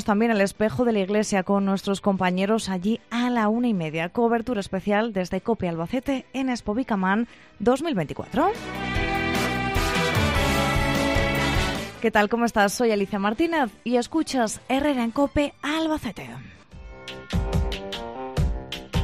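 Nothing is technically wrong with this audio clip.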